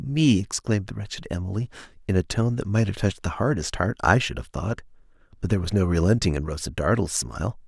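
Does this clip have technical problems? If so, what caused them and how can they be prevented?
No, there's nothing technically wrong to hear in this bit of speech, so there's no cause to track down and nothing that needs preventing.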